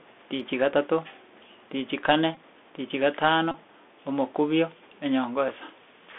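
Throughout, the Bluetooth CVSD headset codec confines the speech to roughly 250 Hz to 3.5 kHz. Its one-bit slope tracking leaves scratchy sibilants and granular hiss, seen as a hard spectrogram ceiling.

Just after "tichi kane", from 2.35 to 2.37 s, a Bluetooth headset packet repeated event replays stale bits for about 19 ms. It makes a brief buzz that shows as a short periodic stripe pattern.

After "tichi kane tichi", from 3.51 to 3.56 s, the same packet repetition spans about 26 ms. It gives a steady 267 Hz buzz, with waveform cycles repeating every 3.75 ms.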